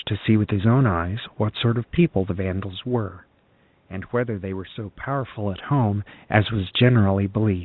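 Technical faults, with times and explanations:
Nothing here counts as a technical fault; the narrow telephone sound, the room's background noise and the level changes around 2.5 s and 5 s, where the talker seems to move relative to the microphone, are all normal parts of a phone-call recording.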